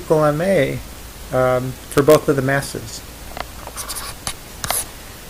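At 2.20 to 2.24 s, chunks play out of order. One chunk of about 10.7 ms arrives three chunks late. The result is a brief jumbled stutter.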